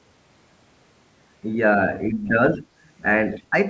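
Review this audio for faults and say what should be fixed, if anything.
The echo canceller likely could not separate the talker's own speech from loudspeaker echo while both ends were talking at once, so it turned the whole signal down. This is speech suppressed in double talk. The speech sags by about 5 dB from 2.1 to 2.35 s, drops much harder, by about 15 dB, from 2.56 to 2.69 s, and dips by about 10 dB at 3.50 to 3.54 s. Tuning the canceller's double-talk detection so near-end speech is held at full level while the far end is active would prevent this.

The echo canceller likely did not fully remove the far end's loudspeaker playback from the microphone, so the other side's voice is leaking through. Brief, faint scraps of a second voice appear at 2.25 to 2.29 s, about 25 dB below the talker and overlapping the first suppression dip, and again at 3.34 to 3.42 s, about 20 dB below. Stronger echo-path modelling with longer adaptation, or a headset instead of a loudspeaker, would prevent this.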